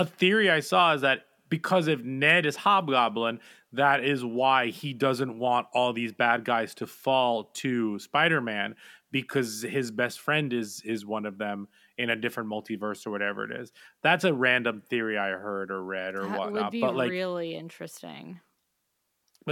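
Nothing technically wrong turns up anywhere in this speech recording, so there's no fault to point to, no time to flag and no cause to chase.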